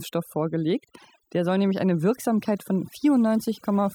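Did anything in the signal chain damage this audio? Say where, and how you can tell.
Yes: overdone noise removal, applied across the whole clip at the processing stage after capture. Between phrases the background drops to near silence broken by twinkling specks. That points to a noise reduction stage set far too aggressively: bands close to its noise estimate are pulled down hard or switched off, and quieter components of the speech sitting near that threshold are gated away with the noise.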